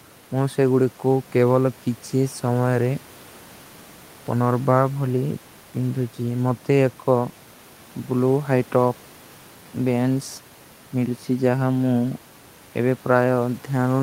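No technical faults can be heard anywhere in this speech recording.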